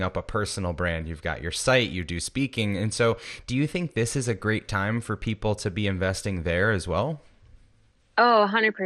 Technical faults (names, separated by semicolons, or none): MP2 compression